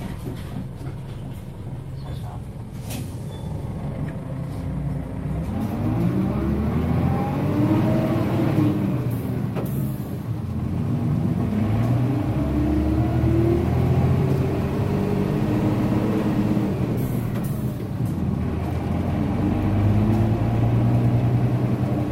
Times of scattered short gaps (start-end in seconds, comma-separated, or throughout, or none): none